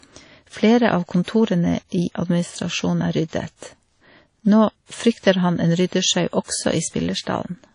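Throughout the speech, a low-rate transform encoder has discarded detail. The damage is plainly audible: a washy, ringing hiss rises and falls with the voice. The sound points to WMA compression, likely at a bitrate around 32 kbps, where long blocks smear quantisation noise over tens of milliseconds and quiet spectral lines are dropped entirely.

The same long blocks cause pre-echo at 1.23, 3.28, 5.87, 6.44 and 7.22 s. Each time a sharp onset lands late in a block, and the noise sized for that loud moment fills the silence just before it. A short hiss runs ahead of the attack by 43, 52, 58, 47 and 50 ms respectively, so each onset sounds softened and smeared.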